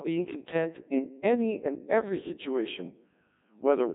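The speech in this clip has been through the Codec 2 vocoder for its whole length, and the damage is heavy. The sound points to a very low rate, around 1.6 kbit/s. At that rate the encoder discards the waveform, keeping only pitch, voicing, energy and a spectral envelope, and the decoder rebuilds the voice from sine waves. The result is a robotic, buzzy voice with nothing above 3.8 kHz.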